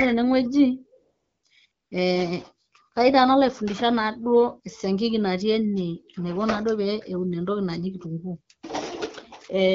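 From 1.03 to 1.43 s, and again from 1.71 to 1.91 s, AMR comfort noise takes over. The phone judged the talker silent and stopped sending speech frames. The receiver filled each gap with smooth synthetic noise. It replaces the real background and switches in and out.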